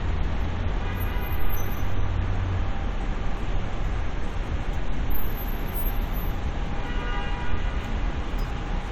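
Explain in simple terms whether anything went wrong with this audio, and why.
Nothing went wrong with this recording of sounds. No technical problem can be heard anywhere in it.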